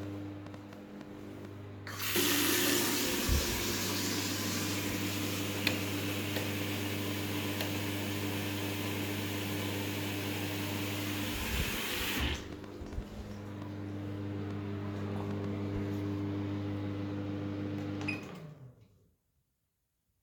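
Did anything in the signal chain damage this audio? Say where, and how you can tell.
Yes. A train of clicks runs from 0.03 s to about 15.45 s, roughly 70 similar pulses at around 4 per second, unevenly spaced and peaking about 5 dB above the sound, audible in quiet gaps too. This likely points to electrical interference or a faulty connection or power supply upstream.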